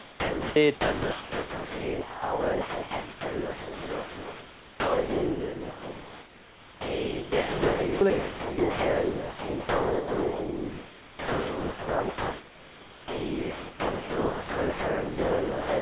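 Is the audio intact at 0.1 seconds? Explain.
No. From 0.00 to 0.56 s the speech gives way to steady, featureless noise, with roughly a quarter second of sound missing. This is likely sound dropped by the voice detector: the sender judged the onset to be background, stopped transmitting, and the receiver filled the gap with comfort noise.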